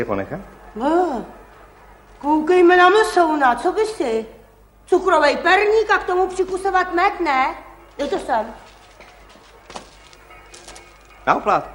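No technical faults can be heard anywhere in the recording, and the signal holds steady throughout.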